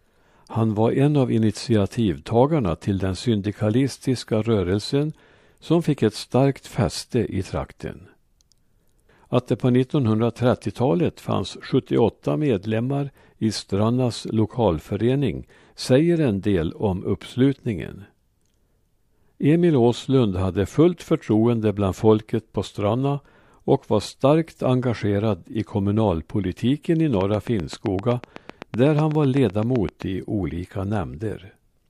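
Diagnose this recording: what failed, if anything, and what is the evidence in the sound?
A train of clicks points to a fault at the analogue wiring or interface stage, most likely interference from nearby equipment or a faulty connection or power supply. From 27.21 s to 30.03 s, after "engagerad i kommunalpolitiken i" and before "i olika", about twenty similar pulses tick at a regular 7.8 per second. They peak around 10 dB above the speech and sit on top of it, audible as steady popping through gaps as well.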